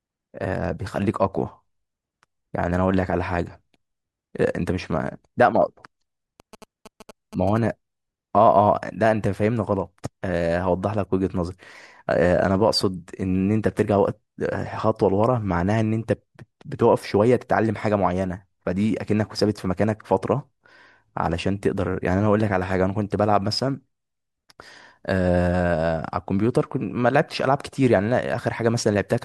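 GSM signalling bursts sound at 6.40–7.58 s. Audio circuitry rectifies a nearby 2G phone's radio bursts. Galloping short 217 Hz buzzes sit under the speech.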